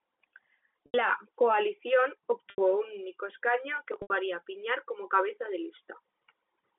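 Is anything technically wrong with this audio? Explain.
Yes, there's packet loss with pitch repetition at 0.86, 2.50 and 4.02 s, each gap about 80 ms, which fits four 20 ms packets going missing. The receiver loops the last pitch period, so you hear a brief buzzy hold fading to silence before the speech cross-fades back. The G.711 telephone band around it sounds as expected.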